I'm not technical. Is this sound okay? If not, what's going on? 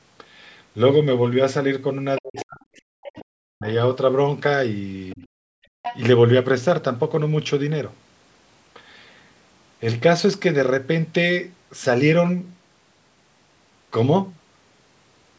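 No. Between 2.17 and 2.44 s, 2.77 and 3.21 s, 5.10 and 5.15 s, and 5.83 and 6.00 s, a faint second voice sneaks in underneath, loudest near 6 s. This is the other side's voice leaking through, likely because the speaker's device played the far end aloud and the echo canceller didn't fully remove it from the microphone.

Around 2.19 to 2.68 s, 3.14 to 3.67 s, and briefly at 5.15 to 5.19 s, the main voice sinks sharply or breaks up. This is speech suppressed in double talk: both sides likely spoke together, and the canceller turned everything down.

From 5.48 to 5.82 s the room sound drops away almost completely, then returns. This is background gated by the echo canceller, which pulled the microphone right down while the loudspeaker was playing.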